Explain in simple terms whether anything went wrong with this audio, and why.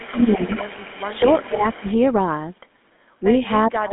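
Several things went wrong. Throughout, the GSM full-rate codec gives the speech a buzzy, gravelly roughness and cuts everything above about 3.8 kHz, unlike plain muffling, which stays smooth.

From the start to 1.92 s, a faint copy of the speech returns about 0.43 s late, most likely an echo leak from a loudspeaker the echo canceller didn't fully remove. It's a repeat, not reverberation.

The speech also dips or breaks up at 0.08–0.62 s, 1.06–1.23 s and 1.43–1.87 s, likely speech suppressed in double talk, ducked while the echo plays. These are dips, not total dropouts.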